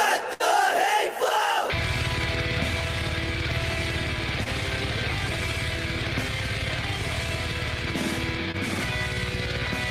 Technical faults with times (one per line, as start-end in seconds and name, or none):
0.33-0.42 burst of packet loss
4.44-4.48 short concealed packet loss
8.52-8.56 short concealed packet loss